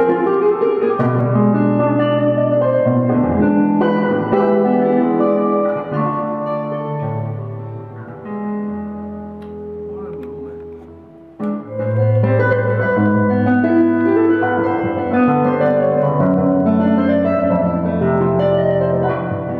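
From 1.21 to 5.69 s the sound turns dull and muffled, as if a blanket were draped over it, and the top end returns once the passage ends. This is de-emphasis applied wrongly: a treble-cut curve meant to undo pre-emphasis was run on audio that either carried none or had already been corrected. The response slopes away smoothly above the midrange, reaching about 14 dB down at 10 kHz relative to 1 kHz.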